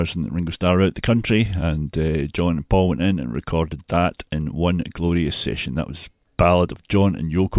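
No technical faults can be heard anywhere in this recording.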